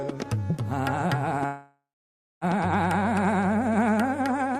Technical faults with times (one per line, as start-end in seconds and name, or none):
1.45-2.44 call audio freeze